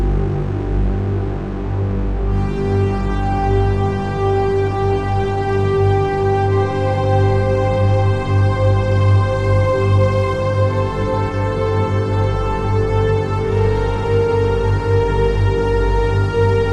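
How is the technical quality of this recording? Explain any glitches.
The technical quality is poor: plainly audible codec damage runs from start to finish. Throughout, the sound is dull and carries a gurgling, granular grit, likely from MP2 compression at a rate that fits about 80 kbps. Too few bits leave upper sub-bands switching on and off and the rest coarsely quantised. Unlike a simple low-pass filter, the top end flickers rather than being cleanly cut.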